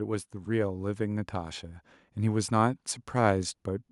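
From 0.31 s to 3.59 s the automatic gain rises: the gain control judged the speech too quiet and lifted its gain by about 6 dB, so voice and background swell together. On a waveform the envelope widens steadily; a spectrogram brightens uniformly across frequencies.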